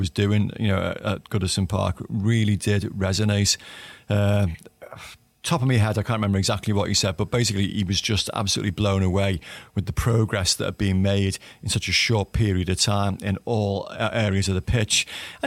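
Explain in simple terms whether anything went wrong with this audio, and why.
Nothing went wrong here; the speech comes across as an ordinary recording, with nothing in it that sounds broken or out of place.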